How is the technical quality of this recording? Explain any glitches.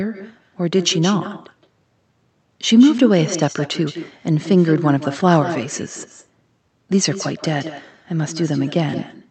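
The recording is compromised by a single persistent fault: an echo with no canceller, present for the whole clip. The speech came through a call codec whose top end stops around 8 kHz.

Every phrase is followed by a fainter repeat of itself, roughly 150 ms later and about 12 dB quieter. The far end was playing the call through a loudspeaker. Its microphone picked that playback up, and nothing removed it before sending it back. The returning copy sounds thinner than the direct speech. It gives a doubled quality.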